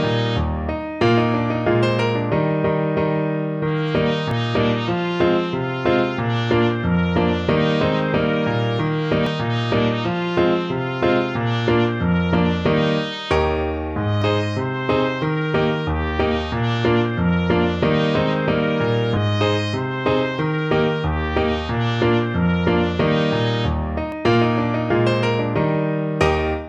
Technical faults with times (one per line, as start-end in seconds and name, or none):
4.31 audio missing between chunks
9.27 audio missing between chunks
14.22 audio missing between chunks
19.17 audio missing between chunks
24.12 audio missing between chunks